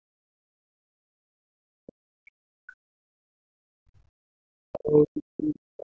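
From 0.08 to 4.53 s, and again from 4.69 to 5.86 s, the speech keeps dipping and breaking up, sometimes dropping by around 40 dB, which sounds like speech suppressed in double talk, likely an echo canceller muting the talker while the far end spoke over them.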